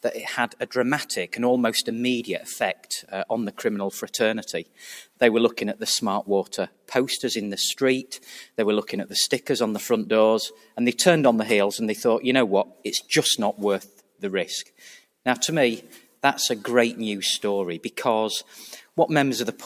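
A noise suppressor built for speech has been left running on this audio, which is not speech, so it keeps pulling steady tones, ambience and decaying tails down as though they were background noise. The gain rides up and down by around 5 dB across the whole clip, giving a restless pumping and thinning. This differs from a compressor, which reacts to loudness, because the suppressor reacts to how steady or noise-like the sound is.

In eight places the suppressor bites harder and cuts the sound itself: 0.49–0.65 s, 2.75–3.12 s, 4.64–4.82 s, 6.5–6.91 s, 10.55–10.77 s, 12.69–12.85 s, 13.85–14.22 s and 16.01–16.19 s. Each cut lasts a few tenths of a second and sinks by about 10 to 12 dB, so sustained parts sag or their decay is chopped while sharp onsets survive. That separation of onsets from sustain sets these cuts apart from a dropout, which would silence everything at once.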